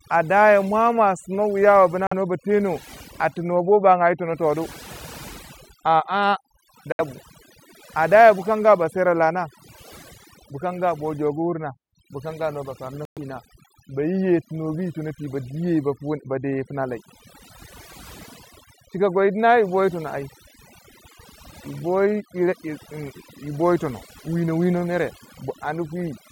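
The speech has its background pushed down and dotted with twinkling specks, the mark of overdone noise removal. The noise reducer was set so strongly that it cut individual frequency bands close to its noise estimate, taking quieter parts of the voice along with the noise. Three silent holes interrupt the speech at 2.07 to 2.13 s, 6.92 to 7.00 s and 13.05 to 13.19 s, lasting about 46, 70 and 116 ms. Each time the sound picks up further along, as though it had kept playing through the gap. These are likely Bluetooth dropouts, where packets failed to reach the headphones in time and were discarded.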